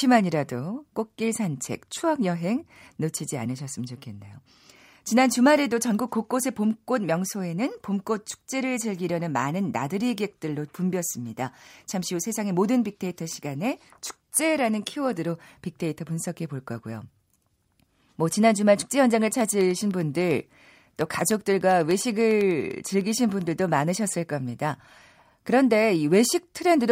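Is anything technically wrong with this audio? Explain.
Yes. From 19.21 to 23.62 s the speech carries a steady train of ticks, ten per second, heard only while there is signal. These are periodic USB or driver dropouts: something stalls the audio path every 0.1 s, and each time a tiny fraction of a millisecond of audio is replaced by silence.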